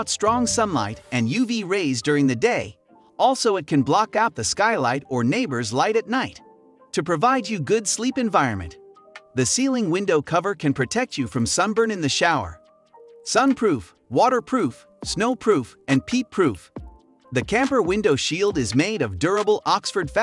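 From 11.36 s to the end, the resampler restarted on every block: each 40 ms block was converted from 48 kHz to 24 kHz separately, leaving edge errors heard as ticking at 25 Hz.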